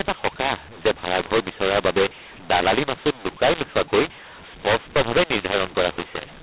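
From start to finish the speech carries a mu-law and A-law mix-up: samples coded with A-law are decoded as mu-law, scrambling levels so it sounds harsh and gritty. The waveform looks jagged and uneven, and pauses show a raised noise floor instead of silence, all below the 4 kHz telephone limit.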